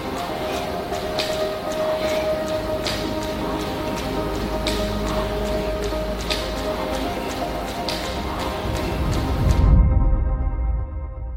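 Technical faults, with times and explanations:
No technical faults can be heard anywhere in this audio.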